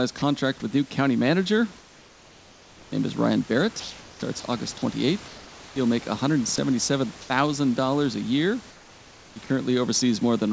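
At 0.18 s, just before "with new county manager", a 40 ms piece of sound drops out, likely cut by the voice detector, which treated it as background. It is sound dropped by the voice detector, a brief gap in the speech itself rather than in a pause. A similar 20 ms loss falls at 9.46 s.

From 1.78 to 2.92 s, after "with new county manager", comfort noise replaces the background. The detector likely stopped transmission in the pause, and the real room noise gives way to a flat, featureless hiss about 4 dB quieter. Comfort noise likewise replaces the background from 8.70 to 9.50 s after "a year".

Between 3.80 and 7.30 s the sound is chopped by the voice detector, likely from repeated switching between sending and not sending. About 1.04 s in total is replaced by comfort noise. Unlike a single dropout, the interruptions recur within the stretch.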